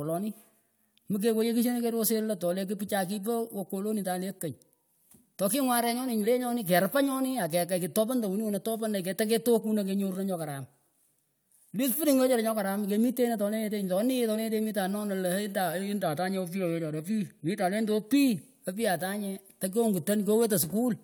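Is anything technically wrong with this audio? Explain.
No, nothing is technically wrong with this audio.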